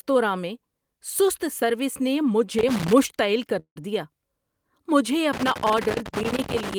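From 2.59 to 2.98 s an irregular burst of scratchy crackle breaks through the speech, and the same loose connector crackle returns for longer from 5.33 to 6.74 s. It comes from a worn or dirty contact in the signal chain that keeps making and breaking as it shifts. Each interruption chops the audio, and any DC sitting on the line turns those breaks into pops.

At 3.59 s the speech stops and a fading buzz stands in for it until 3.78 s, with about 90 ms of that spent in silence. The speech then resumes exactly where it stopped, so nothing is lost, but everything after arrives 165 ms later than before. This is likely a call audio freeze. Delayed packets drained the jitter buffer, the receiver stretched out the last sound while it waited, and it picked up again once the packets arrived.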